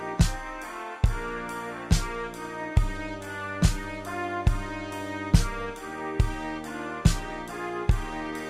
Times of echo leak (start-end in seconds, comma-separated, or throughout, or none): none